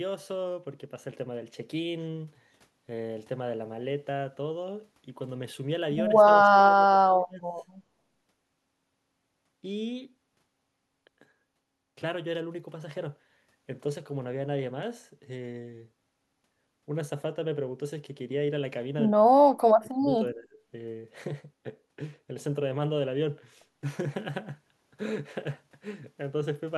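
The speech dips sharply twice, from 6.41 to 7.52 s and again from 19.3 to 20.59 s, sinking by roughly 25 dB in the first stretch and around 35 dB at its deepest in the second, with about a second of each stretch audibly pulled down. This is speech suppressed in double talk, likely from an echo canceller that, with the far side talking at the same moment, mistook this talker for loudspeaker echo and attenuated it.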